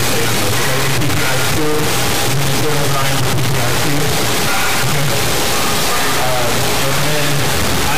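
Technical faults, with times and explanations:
Throughout, integer read as float: 32-bit integer samples treated as 32-bit floats land near zero or far past full scale, so you get a loud, clipped square-wave buzz.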